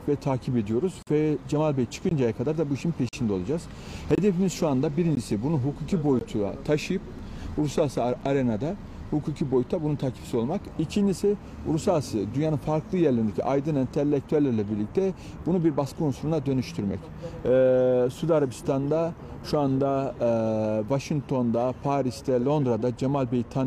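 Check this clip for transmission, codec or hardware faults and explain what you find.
Gaps between stream segments recur about once per second: 1.03–1.07, 2.09–2.11, 3.09–3.13, 4.15–4.18, 5.15, 6.19–6.21, 7.19 and 8.21 s. Timestamp misalignment at 1-second segment boundaries leaves hard-edged silent holes of 3 to 44 ms, with no audio lost.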